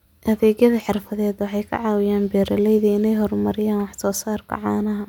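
A speech recording with no technical faults to report. Nothing in the signal chain can be heard going wrong at any point.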